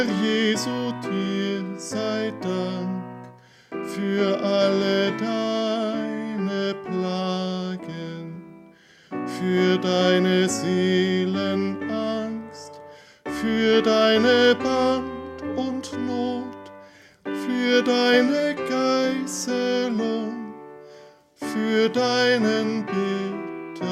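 No technical faults are audible.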